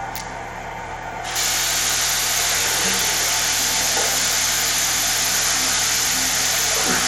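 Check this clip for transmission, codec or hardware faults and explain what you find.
One fault runs through the whole clip, and it sounds like codec damage rather than hardware. The likely cause is Bluetooth SBC compression. Nothing gets through above 16.8 kHz. The top end thins out and flickers, and a gritty, grainy layer sits on the sound throughout. SBC splits the audio into a few wide bands and doles out bits crudely. When bits are tight, the upper bands starve and everything else gets coarsely quantised. That plainly audible damage fits a low link rate of around 96 kbps.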